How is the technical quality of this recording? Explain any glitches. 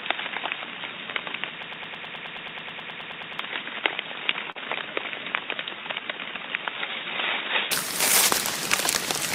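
The recording has three clear technical problems, all in the first eight seconds.

From the start until 7.72 s the audio sounds dull and boxy, with nothing above 3.8 kHz, background noise about 30 dB under the signal, and a level about 5 dB low. At 7.72 s it suddenly opens up, with no gap. This is an input switched to a poorer device, likely a narrower-band microphone or a headset's call profile, which brings its own tone and noise floor.

Between 1.63 s and 3.39 s a broken-record loop stutters mechanically. A 107 ms fragment repeats back to back, 17 times. The stream likely stalled and kept resending the last piece it held, and the audio that belonged in that span is gone.

From 4.51 s to 4.58 s there is a brief smear. This is short concealed packet loss: about 40 ms never arrived in time. The receiver covered 35 ms of it by extending the preceding sound, then blended back into the real audio.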